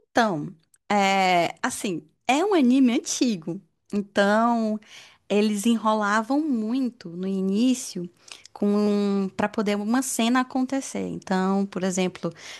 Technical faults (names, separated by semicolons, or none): dropped samples